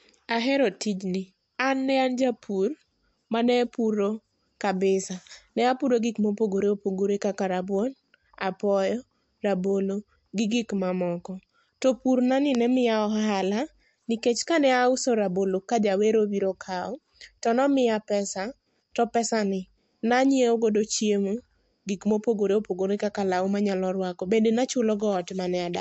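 Throughout the speech, the audio has plainly audible damage of the kind left by MP3 compression, likely from encoding at a low bitrate, which fits a rate of around 50 kbps. Nothing is present above 8 kHz, because the encoder discarded the treble to save bits. Weaker frequency components drop in and out from one frame to the next, giving a watery, swirling texture, with metallic chirping on s sounds and softened consonant attacks.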